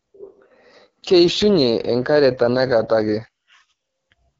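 It's a short speech clip run through the AMR wideband (HD Voice) codec the whole way through, and the damage is plainly audible: a rough, raspy edge on everything, which points to one of AMR-WB's two lowest modes, around 8.85 kbit/s.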